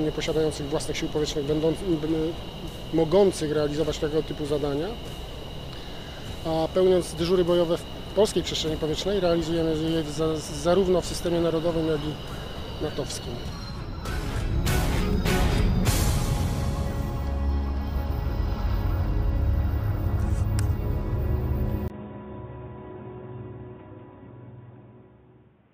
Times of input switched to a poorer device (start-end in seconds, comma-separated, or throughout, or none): 21.88-25.74